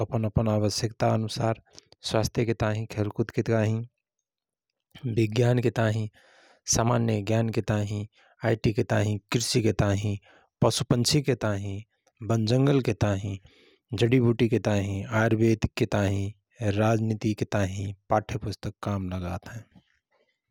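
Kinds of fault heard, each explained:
No dropouts, clicks, distortion or level problems are audible anywhere in the speech.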